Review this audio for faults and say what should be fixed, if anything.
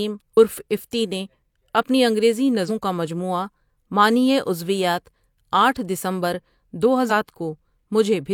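Damaged data in the compressed stream causes three short glitches: 0.33 to 0.38 s, before "افتی نے اپنی انگریزی"; 2.65 to 2.70 s, before "کا مجموعہ معنئی عضویات"; and 7.06 to 7.12 s, after "عضویات آٹھ دسمبر دو". Corrupt frames break decoder sync. Prevent this by transferring files with checksums.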